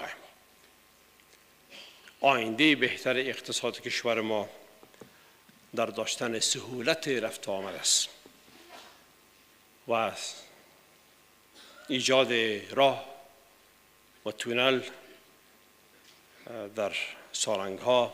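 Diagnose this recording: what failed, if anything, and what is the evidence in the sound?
Nothing in this recording points to a failure at any stage of the chain. No event in the sound calls for a diagnosis.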